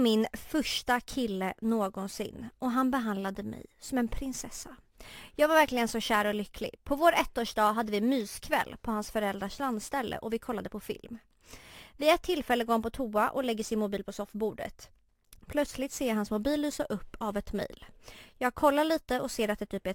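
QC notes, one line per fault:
Throughout, crude rate conversion: unfiltered sample repetition, fitting a 32 kHz to 44.1 kHz change, leaves inharmonic fizz about 25 dB below the speech on loud, bright sounds.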